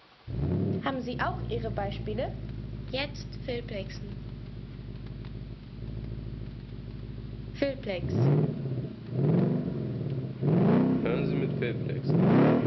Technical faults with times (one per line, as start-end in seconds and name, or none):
none